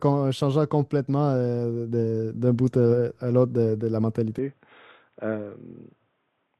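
At 4.38 s the speech turns dull and boxy with no gap, losing everything above 3.8 kHz and dropping about 5 dB in level, likely an input switched to a poorer device.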